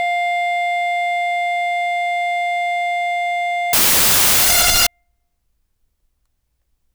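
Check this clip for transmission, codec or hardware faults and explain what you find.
One fault breaks into the music: from 3.73 to 4.87 s a loud, harsh broadband noise replaces it. These are samples built from the wrong bytes: misaligned or swapped byte order turns the rapidly changing low bits into each value's dominant part.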